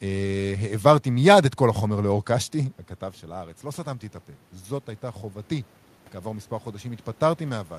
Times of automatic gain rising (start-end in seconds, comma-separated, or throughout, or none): 4.66-7.78